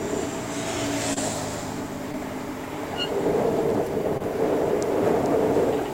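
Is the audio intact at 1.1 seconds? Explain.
No. Short concealed packet loss hits at 1.13 to 1.18 s. About 20 ms of audio never reached the decoder in time, and the receiver papered over the gap by extending the sound that came just before it, carrying it on for roughly 27 ms before blending back into the real signal. The patched stretch is audible as a brief smear or wobble where the actual sound should be.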